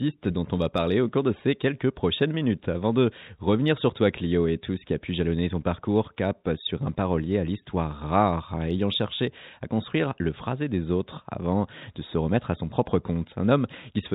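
No technical faults occur at any point in the speech, so there is nothing to describe in time order.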